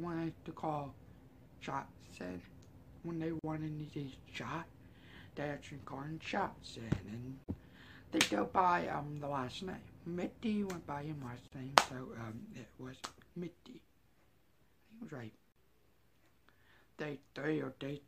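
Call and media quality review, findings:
Gap at a join of encoded pieces, four times: 3.39–3.44 s (46 ms), then 7.44–7.48 s, 11.48–11.52 s and 15.52–15.56 s (40 ms each). Recurs every 4 s. Silence cuts into continuous sound with smeared edges, and the sound resumes where it stopped. Probable component is the segment encoder and concatenation step. Each piece encoded separately, and its start-up delay and last-frame padding were not trimmed before joining.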